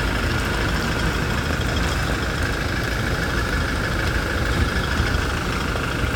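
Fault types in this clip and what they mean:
No technical faults are audible anywhere in this clip of sounds.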